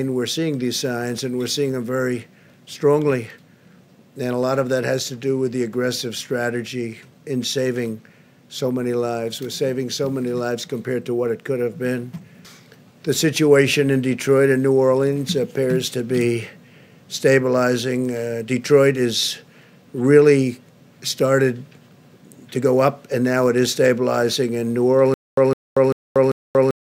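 From 25.14 s to the end, the audio catches on a short burst of about 158 ms that repeats four times, each followed by about 234 ms of dead digital silence, a steady 392 ms cycle. This stutter with silent gaps likely comes from a stalled player or stream re-sending its last fragment at each retry, so the intended audio is lost.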